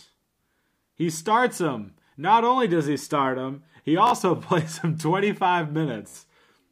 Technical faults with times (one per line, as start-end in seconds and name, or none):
4.07-4.13 Bluetooth stutter
6.08-6.18 Bluetooth stutter